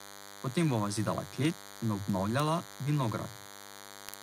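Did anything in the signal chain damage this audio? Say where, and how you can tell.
Yes. DECT cordless phone buzz entered in the analogue wiring. A thin 100 Hz buzz, rich in harmonics, runs throughout at about -20 dB. It is buzzier than mains hum, which sits at 50 or 60 Hz.

Word clock ticks come from the digital input converter. Sharp, uneven ticks recur about every 50 ms from 0.11 to 4.19 s. Each is a one-sample slip against an unlocked clock roughly 400 ppm off. Their strict regularity sets them apart from random dropouts.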